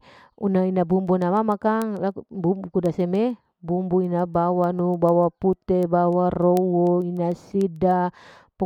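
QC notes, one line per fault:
0.18–8.65 s, word clock ticks: sharp ticks roughly every 0.15 s, one slipped sample each from an unlocked receiver clock; evenly spaced thin vertical spectrogram lines.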